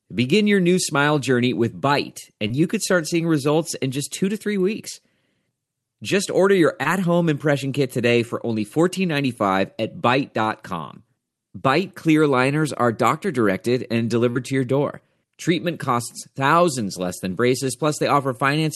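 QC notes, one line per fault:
2.47–2.51 s, short concealed packet loss: about 20 ms of audio missing just before "you could start seeing"; the decoder extended the preceding sound to fill the gap, giving a brief smear.
6.83–6.87 s, short concealed packet loss: about 20 ms lost between "order your" and "home impression kit today", bridged by continuing the prior waveform, heard as a brief smear.
14.31–14.37 s, short concealed packet loss: about 40 ms gone after "are doctor directed and", ahead of "to your door"; the longer synthetic fill produces a wobble before blending back.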